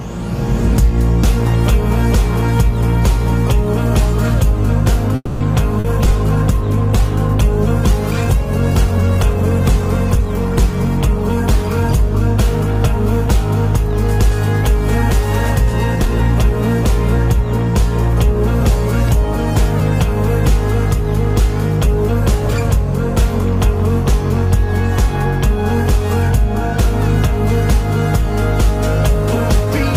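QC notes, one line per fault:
5.15 to 5.43 s, call audio freeze: the last sound gets stretched into a fading buzz or hiss for about 250 ms, then roughly 30 ms of silence, before things pick up right where they left off. Nothing's lost, it's just paused. Likely packets got held up and the jitter buffer ran dry.
5.80 to 5.87 s, short concealed packet loss: 40 ms never made it to the decoder, so the receiver papered over the hole by extending the previous sound and blending back in. You hear a quick smear or wobble there, and whatever was in that gap is gone.
5.88 to 14.46 s, call bitrate drop: the encoder got pushed from 48 down to 16 kbps and sat at the bottom for about 5 s. Coding gets coarser and the top end gets cut, so the sound goes rough and a bit muffled until the rate climbs back.
15.96 to 29.67 s, jitter buffer speed-up: the buffer was holding more than it wanted, so the receiver kept snipping out tiny pitch-period chunks, around 150 ms in total. 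That plays things about 1% faster at the same pitch, too little to sound hurried.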